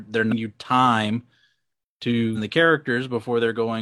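Damaged data in a compressed stream disrupts this speech clip twice, at 0.28–0.33 s just before "you time" and at 2.33–2.38 s. Each time, corrupted frames make the decoder lose sync and hunt for the next frame header, producing a short glitch.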